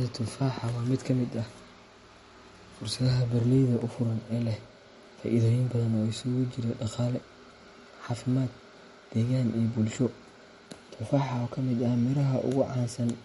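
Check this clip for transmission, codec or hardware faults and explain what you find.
One fault runs through the whole clip. The speech carries plainly audible MP3 compression, likely from a low-bitrate encode around 48 kbps. Short of bits, the encoder discards everything above 11.2 kHz and toggles weak frequency lines frame to frame, so sibilants sound swirly and metallic and onsets smear. A spectrogram shows a hard ceiling at 11.2 kHz with flickering, patchy holes below it.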